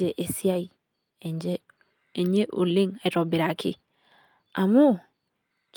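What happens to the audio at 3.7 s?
Nothing goes wrong at 3.7 s; the speech carries on intact through that moment.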